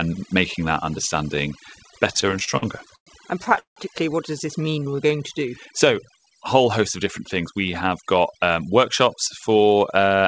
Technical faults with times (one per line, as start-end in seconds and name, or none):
0.00-10.28 overdone noise removal
2.14-3.08 repeated stalls (stutter)
3.44-3.78 repeated stalls (stutter)
4.65-5.08 jitter buffer slow-down
7.21-8.61 jitter buffer speed-up